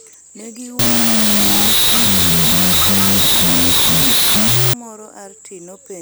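From 0.79 to 4.74 s a wrong sample width turns the speech into harsh noise at half speed. The 16-bit data are read as unsigned 8-bit, unlike a byte-order swap, which keeps speed.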